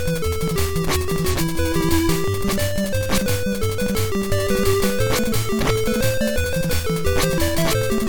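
At 1.30 to 1.36 s the audio carries a short burst of damaged data in a compressed stream, heard as a brief squawk or blip about 54 ms long. Bytes in that stretch of the encoded file were lost or corrupted, so the decoder misread those frames and had to resynchronise on a later frame header. On a spectrogram it shows as a narrow vertical patch of garbled, blocky energy; the waveform shows an abrupt discontinuity there.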